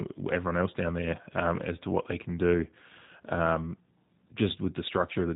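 G.729 codec damage runs through the whole of this speech clip and is plainly audible: nothing above 4 kHz survives, and the voice sounds rough and faintly synthetic, as it is rebuilt from a vocal tract filter, pitch predictor and sparse pulses in 10 ms frames, which fits a low 8 kbit/s VoIP bitrate.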